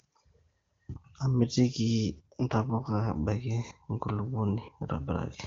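From 2.12 s to 3.16 s there is an AMR rate drop. The speech turns rough and synthetic, with a raspy, buzzy edge. The audio band does not narrow, and there is no gap. The network has told the wideband AMR codec to cut its speech bits and spend more on error protection, the sort of switch a weak radio link forces. The sound points to a fall from 23.85 kbit/s, where the HD Voice speech around it is clear, to about 8.85 kbit/s. Clarity returns once the rate goes back up.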